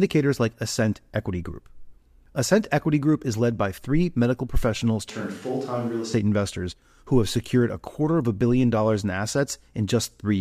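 Right after "by three medical professionals", at 5.10 s, the speech suddenly turns roomy and hollow, thinner in the bass, a few dB quieter, with room noise around 30 dB below the voice. It's likely a switch to a distant microphone, and it snaps back at 6.14 s before "investors who have secured".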